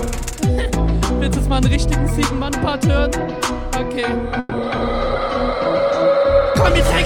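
At 4.39 to 4.53 s a call audio freeze holds the sound for 120 ms. It becomes a fading buzz, then resumes intact. Delayed packets likely emptied the jitter buffer.

Short concealed packet loss follows at 4.57 to 4.60 s and 4.76 to 4.79 s. Each is a brief smear where lost audio was synthesised and blended back.

At 4.83 s a call bitrate drop begins, from 96 to 15 kbps, lasting to the end. The sound turns rough and muffled.

A jitter buffer slow-down at 5.84 to 6.40 s repeats pitch periods, adding 45 ms. Playback runs at 93% speed, drawn out but unchanged in pitch.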